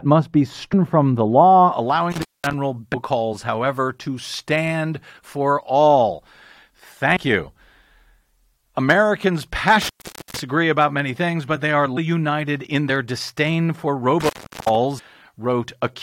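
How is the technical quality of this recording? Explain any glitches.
The recording is speech with three kinds of fault: a dulled opening, five short glitches from damaged compressed data, and three dropouts from a bad connection.

De-emphasis applied wrongly affects 0 to 1.72 s. A treble cut meant to reverse pre-emphasis was applied where none existed, or applied twice. The response slopes smoothly downward to about 11 dB lower at 10 kHz than at 1 kHz, so this opening sounds dull and muffled.

Damaged data in a compressed stream produces brief glitches at 0.72 s, at 2.93 s just before "however to stand for", at 7.15 to 7.17 s, at 11.96 s between "things but they are" and "united in their", and at 14.98 to 15.00 s. Corrupted bytes make the decoder misread frames and lose sync while it hunts for the next header. Each one is a momentary disturbance or hole.

Intermittent contact causes three dropouts, at 2.12 to 2.53 s (open about 209 ms), at 9.82 to 10.39 s just before "about many things but" (open about 451 ms), and at 14.20 to 14.75 s (open about 376 ms). 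A loose cable or plug briefly breaks the circuit. The sound cuts out or breaks up with crackle at the edges, and hiss remains while the line is open.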